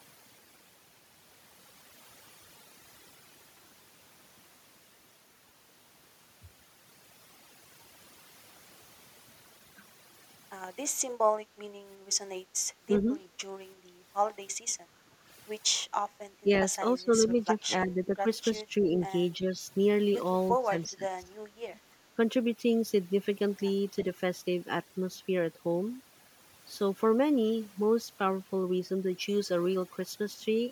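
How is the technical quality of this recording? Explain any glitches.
The recording has three kinds of fault: heavy-handed noise reduction throughout, and a cluster of level dips between about 12.9 and 21.3 s.

Overdone noise removal runs through the whole clip. The suppressor pushes individual frequency bands toward silence whenever they resemble its noise estimate, taking quieter speech detail with them. The background drops and breaks up into twinkling specks.

Speech suppressed in double talk occurs at 12.91–13.10, 16.43–16.51, 16.97–17.32, 17.52–18.26, 18.59–18.94, 19.38–19.62 and 20.51–21.31 s. The talker's level dips briefly, by a few dB in the mildest spots and up to around 15 dB in the deepest, likely because the echo canceller confused the local voice with loudspeaker echo and turned both down.

Background gated by the echo canceller appears from 14.94 to 15.25 s. While the far end was playing, the canceller clamped the microphone, so the room sound drops by about 7 dB for roughly a third of a second, then returns when the canceller releases.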